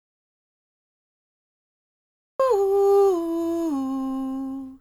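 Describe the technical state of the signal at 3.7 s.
At 3.7 s the music plays through intact, with no dropout, click, distortion or other fault at that point.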